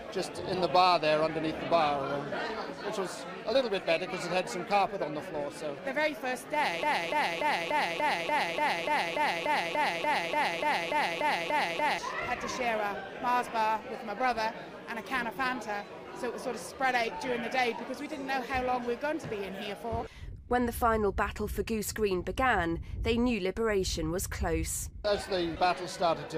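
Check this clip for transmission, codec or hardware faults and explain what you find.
Two faults turn up: a long repeating loop and one small skip.

From 6.83 to 11.99 s there's a broken-record loop. A 291.9 ms fragment plays 18 times back to back, and whatever belonged in that stretch never arrives. The likely cause is a stalled player or stream that kept resending its last buffer.

At 20.81 s, compressed frames are skipped. About 20 ms of audio drops out because frames went missing or the decoder rejected them as damaged.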